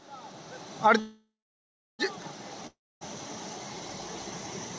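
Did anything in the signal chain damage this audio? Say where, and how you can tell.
Yes. From 1.00 to 2.01 s the sound smears into a fading buzz or hiss, then about 0.72 s of silence, resuming intact: a call audio freeze, likely network delay starving the jitter buffer.

From 2.67 to 3.03 s a fading tail drops into roughly 0.26 s of silence, and about 0.34 s of audio never returns: a long network dropout, likely lost packets.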